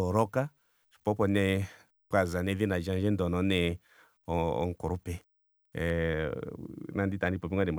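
From 5.9 s to the end, the speech turns dull and muffled. This is de-emphasis applied wrongly. A treble cut meant to undo pre-emphasis hit audio without it or was applied twice. The response slopes smoothly downward, about 14 dB lower at 10 kHz than at 1 kHz.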